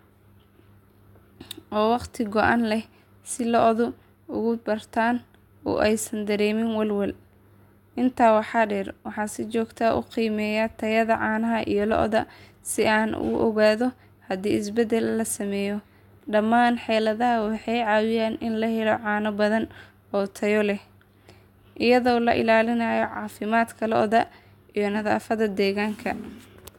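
Nothing goes wrong anywhere in this speech recording, so there's simply no fault to point to at any moment.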